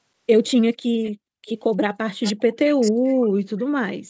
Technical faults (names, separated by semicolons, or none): echo leak; speech suppressed in double talk